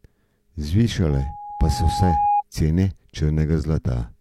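Loudspeaker feedback squeal runs through this speech clip from about 1.10 s to 2.43 s, a single tone at 825 Hz that swells over roughly a second until it sits at about the same level as the speech. The microphone is picking up the loudspeaker it feeds, and at 825 Hz the gain around that loop exceeds one, so the tone keeps reinforcing itself on each pass until it stops at 2.43 s.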